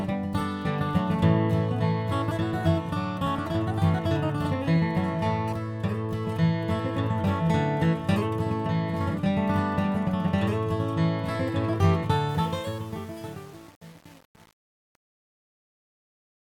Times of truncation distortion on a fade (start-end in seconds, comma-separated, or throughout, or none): 12.29-16.50